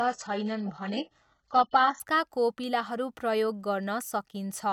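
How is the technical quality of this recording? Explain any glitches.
The speech has one clear glitch at the start. From 0.0 to 2.0 s, an adaptive stream starting at a low bitrate leaves nothing above 8 kHz and stronger codec artefacts, then jumps cleanly to AAC-LC 96 kbit/s with no gap, unlike a dropout.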